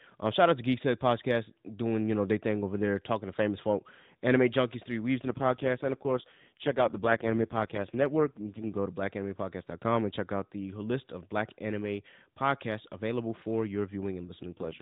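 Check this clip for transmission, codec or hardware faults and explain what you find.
Two AMR rate drops are present in this speech, carried over the AMR narrowband mobile codec. From 5.20 to 8.78 s, just after "folk anime junkies three", and from 14.50 s to the end, the codec falls back to fewer bits. The band and continuity stay intact, but the voice turns buzzier and more synthetic, which fits a drop from 12.2 to 4.75 kbps.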